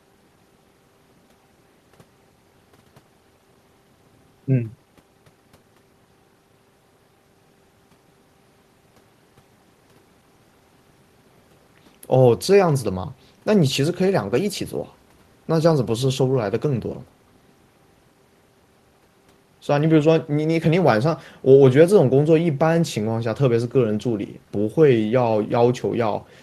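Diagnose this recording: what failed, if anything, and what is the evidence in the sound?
Nothing failed; no fault is audible anywhere here.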